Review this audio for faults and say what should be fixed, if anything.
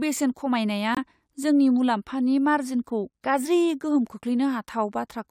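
Corrupt frame muted, 0.95 to 0.98 s: an abrupt 34 ms silence fitting one rejected frame. Unlike a buffer dropout, everything afterwards keeps its timing. Prevent it with error protection or retransmission on the stream, and use loss concealment rather than inserting silence.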